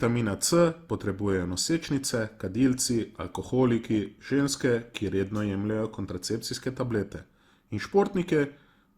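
Throughout the speech, the sound is swirly, smeared and hollow, with blurred attacks. This is likely generation loss from repeated lossy re-encoding, consistent with about five passes through Opus at around 64 kbit/s.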